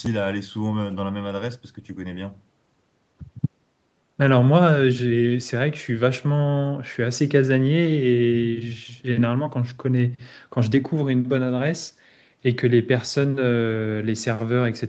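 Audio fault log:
The speech has passed through call microphone processing and a WebRTC call path, with nothing above 8 kHz, which fits an Opus codec running at wideband, and no faults can be heard.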